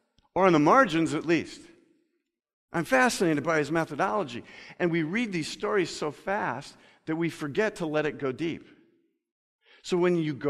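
Nothing goes wrong anywhere in this speech recording; there are no dropouts, glitches or other technical faults to point to at any moment.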